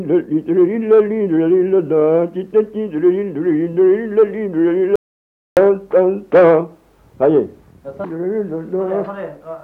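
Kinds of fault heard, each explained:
Audio dropout to silence: the sound cuts out abruptly at 4.96 s into total silence with no room tone for 0.61 s, likely an input link lost while recording continued.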